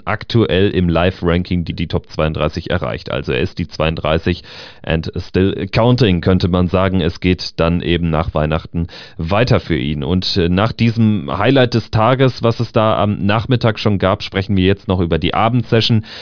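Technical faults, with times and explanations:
Nothing stood out on listening to the speech recording.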